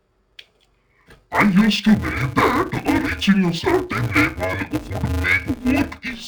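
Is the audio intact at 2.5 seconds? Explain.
No, at 2.5 s the speech is still in interleaved audio read as planar, running the whole clip. Each 5.33 ms block's alternating samples get split into halves, so it sounds dull and robotic with a buzz near 188 Hz.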